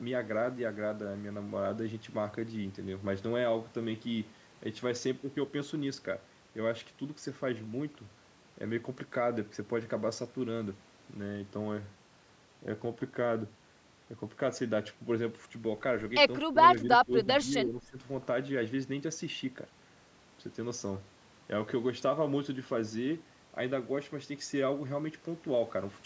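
From 16.45 to 16.58 s, 16.82 to 17.28 s and 17.45 to 17.98 s, the speech dips in pieces. The first drop is deepest, around 15 dB. The later two reach about 10 dB. This is likely speech suppressed in double talk, with the echo canceller ducking the talker.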